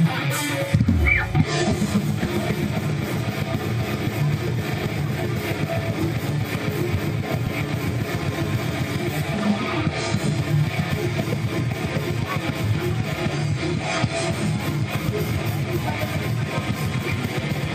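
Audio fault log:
No technical faults are audible anywhere in the audio.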